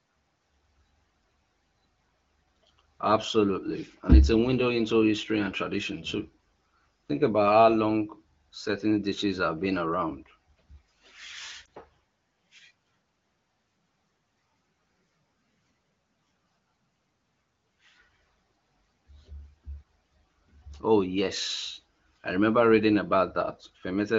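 At 11.65 s there is a single lost AMR speech frame. A radio error corrupted one 20 ms frame. The AMR-WB decoder filled the gap by repeating the previous pitch and vocal tract settings at lower gain. The result is a brief dip or warble in the speech.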